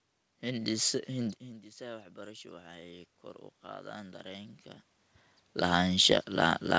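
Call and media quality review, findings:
Automatic gain rising, 1.46–4.6 s. Input drops about 20 dB; AGC ramps gain up about 7 dB over three seconds. Voice and room noise swell together.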